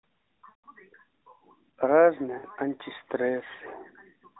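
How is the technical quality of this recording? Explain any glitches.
There are two dropouts from lost AMR speech frames, and the narrowband phone-band sound around them carries only light codec damage. The first runs 0.50 to 0.64 s, about 140 ms, which fits seven 20 ms frames. The second is 2.38 to 2.46 s, about 60 ms. Those frames arrived corrupted, so the decoder kept replaying its last good pitch and vocal-tract settings at falling gain. You hear the sound smear and sag toward silence, then return briefly weak.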